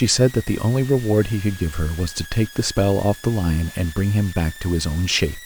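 A thin high whistle runs under the speech from start to finish, wandering between about 1.64 and 1.99 kHz and sitting roughly 20 dB below the speech. This is switching supply whistle: a power supply's switching circuit cycling at an audible rate, its pitch shifting as its load changes.

Alongside it, a grainy, gritty distortion clings to the speech throughout. It is roughest on quiet stretches, where the sound breaks up or sputters, with the error about 25 dB below the signal. This is likely low bit depth without dither: rounding to very few levels, which fits roughly 6 bits.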